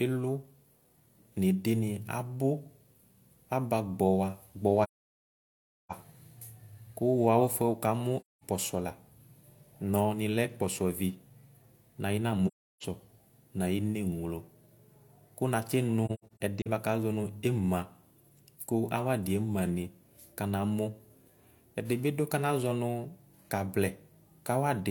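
Soft-edged silences break into the speech at 4.83 to 5.92 s (about 1.07 s), 8.21 to 8.44 s, and 12.47 to 12.84 s, and from 16.05 to 16.67 s there is a cluster of shorter gaps, the longest about a tenth of a second, just before "bvakʋ azɔ". Each hole fades out and back in, the mark of AAC frame loss with muting: the decoder zeroed the missing frames' spectrum and the overlapping windows smoothed the edges.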